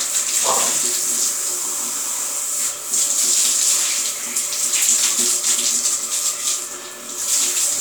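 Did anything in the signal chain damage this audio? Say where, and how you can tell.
No, nothing damaged this audio.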